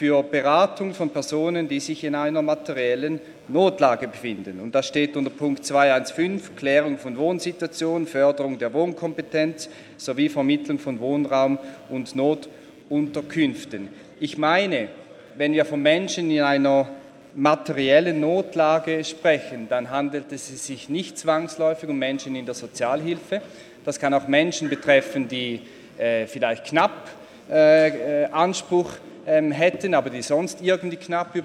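Computer activity noise runs through the whole clip: a faint buzzing pulse, repeating around 100 times per second and sitting roughly 40 dB below the signal. Processor or graphics load is disturbing the audio circuit's shared ground, so the buzz follows the computer's activity, not the sound.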